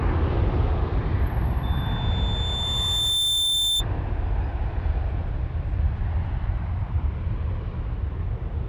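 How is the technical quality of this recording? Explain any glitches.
The recording is marred by a loudspeaker feedback squeal. From 1.63 s to 3.84 s a single piercing tone at 3.6 kHz rises out of the sound, swelling over roughly a second and a half until it is about as loud as the audio itself, then stopping. It arises when a microphone hears the loudspeaker it is driving and, at 3.6 kHz, the loop returns more than it sends, so that frequency feeds on itself and keeps growing.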